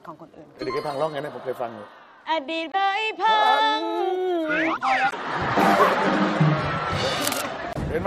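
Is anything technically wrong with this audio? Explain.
Yes. Damaged data in a compressed stream causes brief blips at 2.71–2.75 s, 5.08–5.13 s and 7.70–7.77 s. Corrupted frames make the decoder lose sync and skip ahead. From 7.15 to 7.41 s, dense rustling scratch sits just under the sound's level. This is likely cable scratch noise from a worn connector being moved.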